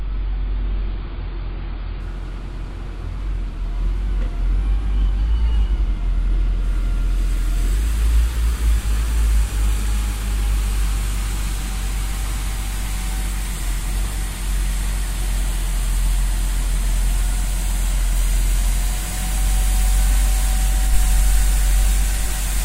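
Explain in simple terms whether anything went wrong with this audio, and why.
Yes, something went wrong at the start: an adaptive stream starting at a low bitrate. The player began on a cheap, low-quality version to start quickly, then switched up at 2.0 s. Until then, nothing above 5 kHz comes through and compression artefacts are stronger. The quality then improves suddenly, with no gap.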